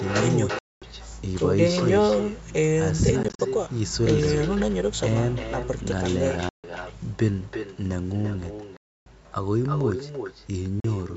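From start to finish, the speech is shadowed by a quieter, thinner copy arriving about a third of a second later, at about 8 dB below the direct sound. This is echo with no canceller: the far end's loudspeaker feeds back into its microphone, and nothing removes it before it returns.

The sound then cuts out abruptly into silence at 0.59–0.82 s, 3.23–3.39 s (several short gaps of up to 40 ms scattered across that stretch), 6.49–6.64 s, 8.77–9.06 s and 10.80–10.85 s. Each time it resumes further on, as if it had kept playing. The likely cause is Bluetooth dropout, where late audio packets were discarded on the way to the headphones.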